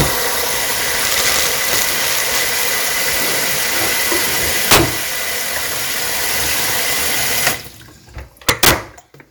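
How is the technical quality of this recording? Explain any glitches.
The recording is marred by integer overflow at 0.01 s, 1.05–1.89 s, 2.63 s, 4.71–4.78 s, 7.47 s and 8.49–8.71 s, where peaks overdriven by about 1 to 10 dB wrap to the opposite sign instead of limiting. Each wrap is a harsh crack, seen as large vertical jumps in the waveform and broadband spectrogram streaks.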